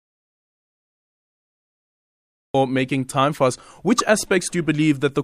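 From the very start of the speech clip until about 2.54 s there is an audio dropout to silence: the file opens already in digital silence, with no room tone or hiss at all, and the speech only begins abruptly after that point. The input was likely lost, through a disconnected device, a failed link or a mute, while the recorder kept writing silence. On a waveform it is a flat line; on a spectrogram, a completely empty band before the speech starts.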